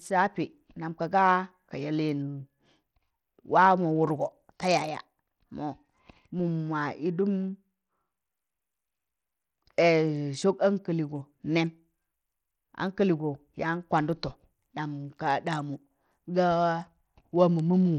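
Bluetooth SBC compression runs through the whole speech clip, audible from the first second to the last. The damage is plain: the upper frequencies thin out and flicker in and out, and a gritty, granular noise rides on the sound, with aliasing. The likely cause is SBC coding at a low bit pool, fitting a rate near 80 kbps, where the weak top sub-bands are starved of bits and the remaining bands are coarsely quantised.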